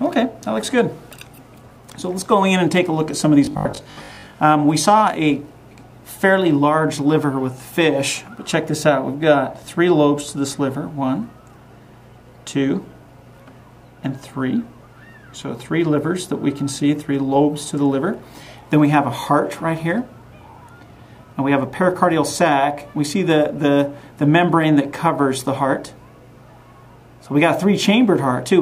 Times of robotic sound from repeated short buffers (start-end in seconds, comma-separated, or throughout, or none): 3.45-4.35